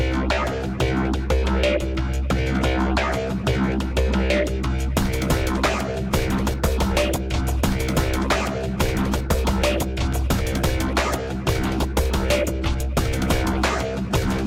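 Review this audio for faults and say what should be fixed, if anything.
There's one loud pop to fix, a single sharp click from about 10.13 to 10.15 s, peaking a few dB above the sound around it, which carries on underneath. That kind of brief spike is most likely an electrical transient, something like a connector being touched, a switch flipped, a static discharge or a driver hiccup, jumping straight onto the signal. To prevent it, keep cables and switches untouched while recording and make sure everything is properly grounded.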